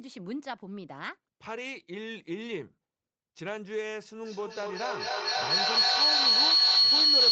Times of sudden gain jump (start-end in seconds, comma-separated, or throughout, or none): none